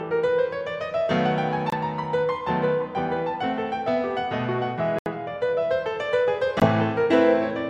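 Bluetooth stalls interrupt this music clip at 1.70–1.74 s, 4.99–5.07 s and 6.60–6.67 s, dropping to silence for 24 ms, 74 ms and 17 ms before the music resumes. The likely cause is radio interference delaying packets until the headphones' buffer emptied and playback waited for retransmissions.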